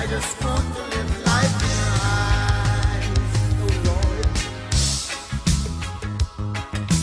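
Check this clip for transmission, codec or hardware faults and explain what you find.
No fault can be heard anywhere in the clip. Nothing in it calls for further explanation.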